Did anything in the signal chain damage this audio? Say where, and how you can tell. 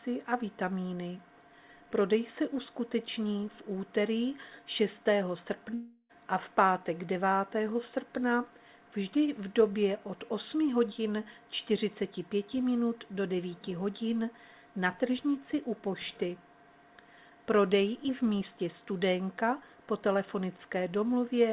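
Yes. From 5.74 to 6.11 s the sound gives way to a fading buzz or hiss for about 0.35 s, then a brief silence of about 30 ms before it resumes with content missing. This is likely a long network dropout, with the receiver filling the gap.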